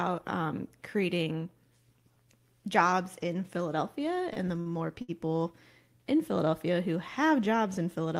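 Repeated stalls (stutter) from 4.33 to 5.10 s: packets arrived late, so the jitter buffer ran dry four times. The receiver stretched the last sound to fill about 150 ms, with gaps up to 69 ms. Nothing is lost, but the speech drags and stutters.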